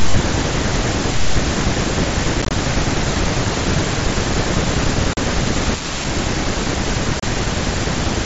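At 2.42 to 2.51 s the speech breaks up with unconcealed Bluetooth headset packet loss. About 52 ms of audio vanishes in several gaps scattered over 90 ms, the longest 22.5 ms, giving a rough, chopped stretch. Further holes follow at 5.13 to 5.17 s (37.5 ms) and 7.20 to 7.23 s (30 ms). The lost headset packets were filled with silence or an idle pattern instead of being concealed, so each gap has abrupt edges. On the waveform these appear as flat cuts, and on the spectrogram as blank vertical slots across the mSBC band up to 8 kHz.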